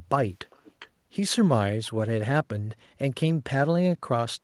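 Speech clip with an echo leak from 0.50 to 0.89 s: a faint copy of the voice returns about 0.41 s late, roughly 20 dB down, likely from a loudspeaker echo canceller letting it through. A spectrogram shows weak, delayed repeats of the harmonic bands.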